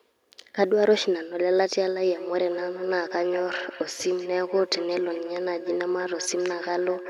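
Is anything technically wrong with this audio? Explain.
Yes, there's a feedback echo between two devices from about 2.07 s right through to the end at 7.09 s. Two devices in the same room are on one call, so one plays back what the other's mic sent, and that mic hears it again. Neither echo canceller catches it, since each only removes what its own device plays. The speech comes back roughly every fifth of a second, up to about 13 dB below the direct speech, with a thin, ringing quality.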